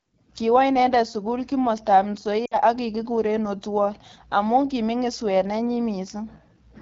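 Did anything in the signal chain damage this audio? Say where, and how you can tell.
Yes. At the codec stage, AMR wideband (HD Voice) coding runs through the whole clip. The speech sounds rough and raspy, which fits a low mode near 8.85 kbit/s. A spectrogram shows smeared harmonics below 6.4 kHz and a shaped noise band from 6.4 to 7 kHz.

At the network stage, lost AMR speech frames cut in from 2.45 to 2.58 s, between "sukul kimostab" and "ak kikikure". The decoder stretched the last good frame with falling gain, so the sound drops to near silence within two frames. About 60 ms points to three lost frames. The waveform tapers there, and the spectrogram shows frozen, fading harmonics.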